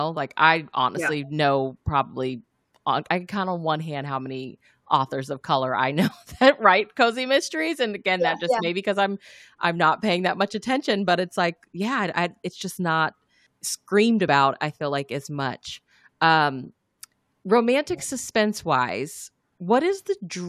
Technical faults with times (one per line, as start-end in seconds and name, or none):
14.27 compressed frames skipped